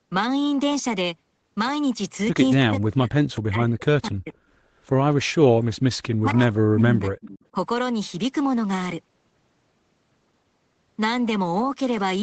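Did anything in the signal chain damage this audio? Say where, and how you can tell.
Yes. Speech is suppressed in double talk at 2.63–3.13 s, 3.40–4.34 s and 6.19–7.16 s, dipping by roughly 40 dB. This happens at the call-processing stage, likely because the echo canceller ducked this talker while the far side spoke.

An echo leak appears at 3.34–3.40 s and 7.21–7.39 s. A delayed copy of the voice comes back 259 ms late, about 30 dB and then about 20 dB below the speech. The likely cause is residual loudspeaker pickup that the canceller missed. The fixed delay marks it as a discrete echo, not room reverberation.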